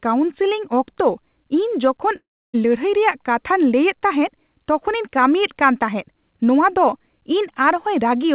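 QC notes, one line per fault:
2.16–2.55 s, long network dropout: About 380 ms of audio is lost, most likely because packets stopped arriving on the call path. The receiver fills the gap by carrying on the last sound as a buzzy tone that fades out, so roughly 300 ms of near-silence follows before speech resumes. Whatever was said in that stretch is gone. The 4 kHz band limit of the G.711 A-law link is heard on both sides.
7.71 s, dropped samples: A single sharp click, with no gap in the speech. It likely comes from a handful of samples, well under a millisecond, missing from the stream. The waveform jumps straight from one value to a later one, and that step puts a brief burst of energy across the whole band. It shows as a thin vertical line in the spectrum and is too short to remove any audible sound.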